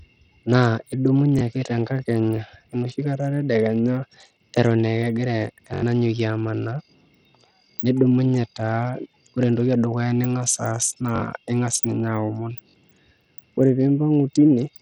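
Across the whole speech clip the top end is thin and flickery, with a gritty, aliased edge on everything. That's likely Bluetooth SBC compression run at a low rate, around 64 kbps, starving the upper sub-bands of bits and quantising the rest coarsely.

Then there are repeated buffers: at 1.39 to 1.41 s, 5.74 to 5.82 s, 11.16 to 11.20 s and 12.69 to 12.74 s. In each, a slice of about 21 ms, which fits a 1024-sample buffer, replays with hard joins, once, four times, twice and twice. That gives short stutters and drops roughly 20, 100, 40 and 40 ms of audio.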